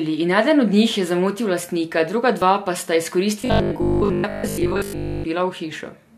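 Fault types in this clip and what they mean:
Overlap between stream segments: at 2.42 s a tiny skip interrupts the speech. Two pieces of the stream claimed the same stretch of time, so the player discarded the overlapping portion even though that audio had not actually been duplicated. Roughly 9 ms of real speech disappears, and the waveform jumps straight from one point to another with no smooth transition. The result is a brief skip rather than a gap long enough to hear as silence.
Robotic sound from repeated short buffers: from 3.42 s to 5.28 s the speech turns into a rigid, metallic buzz at 50 Hz. It still tracks the rough shape of the speech. The likely cause is new audio arriving too infrequently, so playback kept looping the most recent 20 ms chunk, whose length sets that 50 Hz pitch. Most of the real audio in this stretch, something like two thirds or more, was skipped while those repeats filled the time.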